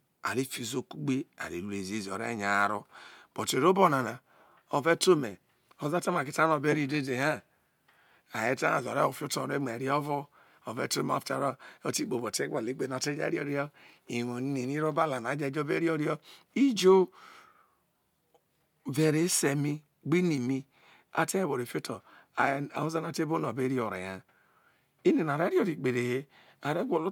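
No technical fault can be heard anywhere in the speech recording, with the signal holding steady and continuous throughout.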